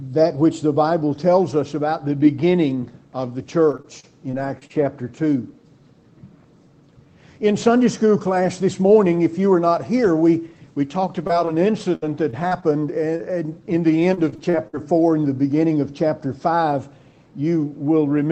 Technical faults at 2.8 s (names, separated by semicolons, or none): none